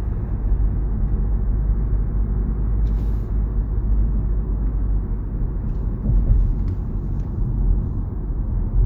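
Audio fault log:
No faults can be heard anywhere in this recording of sounds: the signal stays intact and continuous, with nothing added to or missing from it.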